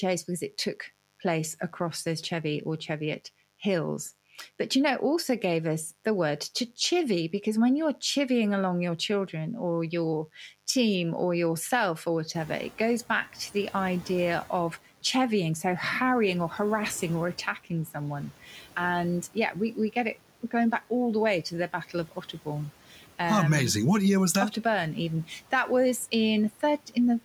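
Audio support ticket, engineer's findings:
Mains buzz, throughout. Steady raspy buzz at about 30 dB below the speech, built on 50 Hz with harmonics reaching several kHz. Probable cause is a dimmer, rectifier or unshielded lead injecting switching spikes twice per mains cycle. The rasp separates it from a pure hum.

Noise suppressor catching up, 12.34–14.56 s, between "team or yourself or" and "chevying so harrying or". Room noise steps up by about 23 dB near 12.5 s and first passes with less reduction. Over 2.22 s it sinks by about 8 dB as the suppressor's noise estimate adapts. This is one slow settle after a step, not repeated pumping. The room noise itself, about 22 dB under the speech afterward, is part of the recording.

Speech cut by the noise suppressor, 18.44–18.64 s, right after "harassing or attacking someone". Roughly 150 ms of speech is pulled down by up to about 7 dB and sounds swallowed, because the suppressor treated it as noise. 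Speech stays audible, so this is not a dropout.

Speech cut by the noise suppressor, 22.09–22.47 s. Same mechanism, deeper: up to about 11 dB over roughly 100 ms. The background dips along with the speech, which separates it from a quiet talker.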